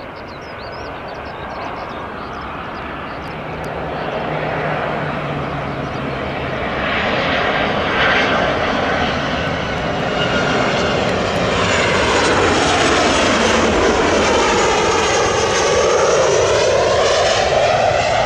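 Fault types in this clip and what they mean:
No technical faults are audible anywhere in this clip.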